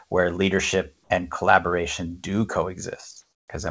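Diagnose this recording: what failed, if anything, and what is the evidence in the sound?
The call processing stage most likely switched to discontinuous transmission in a pause, so the receiver played comfort noise in place of the background. From 3.22 to 3.48 s, the real background, about 47 dB below the loudest speech, becomes a steady, featureless hiss about 5 dB quieter.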